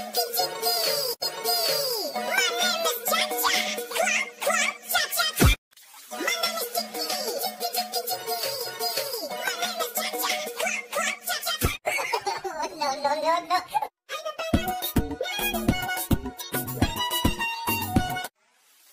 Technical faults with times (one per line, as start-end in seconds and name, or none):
none